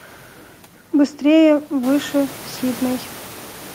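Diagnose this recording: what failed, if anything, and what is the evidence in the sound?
Nothing in this speech recording points to a failure at any stage of the chain. The room noise under the voice steps up by about 14 dB at roughly 2 seconds and then sits about 21 dB below the speech, which is background sound picked up by the microphone in the room rather than anything the system did.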